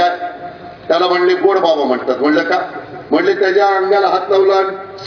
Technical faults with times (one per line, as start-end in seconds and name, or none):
none